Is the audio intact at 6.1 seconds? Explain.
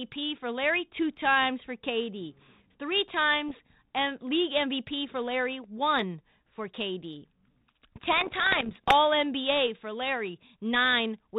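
Yes, at 6.1 seconds the speech is intact, carried through G.726 ADPCM at 32 kbit/s with only light coding roughness and no fault at that moment.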